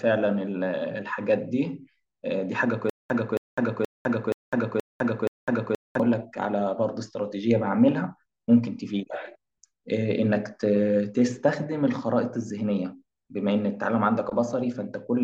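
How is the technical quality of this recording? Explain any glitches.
The recording has one clear glitch. From 2.90 to 6.00 s, a stutter with silent gaps: a 271 ms burst of speech repeats six times, each followed by about 204 ms of dead silence. That is likely a stalled stream replaying its last fragment on each retry, and the speech that should have played is lost.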